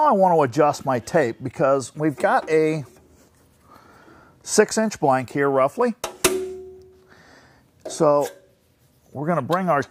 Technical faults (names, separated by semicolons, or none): none